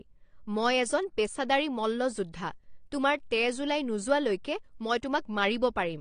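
From start to finish the speech sounds dull and smeared, with a watery, warbling fizz on sibilants and sustained vowels. The likely cause is AAC compression at a low bitrate, consistent with AAC-LC at around 32 kbps. A spectrogram shows a hard ceiling at about 9.7 kHz, with nothing above it, and patchy holes and blotches below it where the encoder discarded or coarsely quantised bands. The waveform looks unremarkable.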